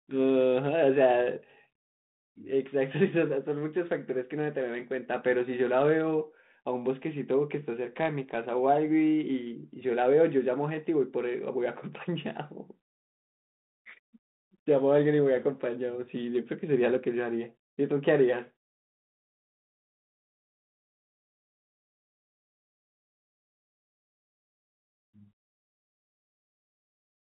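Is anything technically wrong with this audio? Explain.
No, nothing stood out on listening to this speech, which comes through what sounds like a 32 kbit/s G.726 telephone link.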